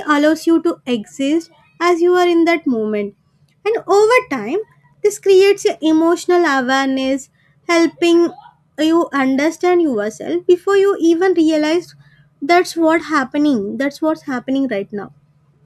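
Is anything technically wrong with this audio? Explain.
Yes. The speech carries Wi-Fi interference from 4.44 s to 6.97 s. A nearby Wi-Fi radio transmits a beacon every 102.4 ms, and part of the audio circuit rectifies that RF energy, turning each transmission into a small audible pulse. The result is a steady ticking at roughly ten clicks per second, sitting very low, about 50 dB below the speech.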